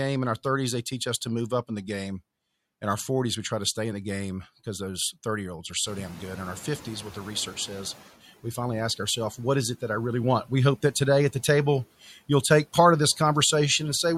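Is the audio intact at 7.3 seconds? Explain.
No. A noise suppressor catching up runs from 5.86 to 8.07 s, after "year olds are". Room noise jumped about 19 dB near 6 s, and the suppressor's estimate lagged, so at 7.3 s the noise still leaks through before sinking about 8 dB by "we finally ask ourselves".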